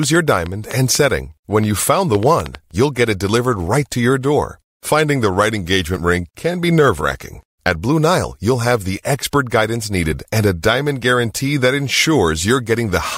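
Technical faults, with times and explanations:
0.03–2.56 s, train of clicks: about ten clicks of similar shape tick over the speech at an uneven pace near 4 per second, peaking well above the speech level. Repeated pulses like these most likely come from electrical interference or a faulty connection or power supply.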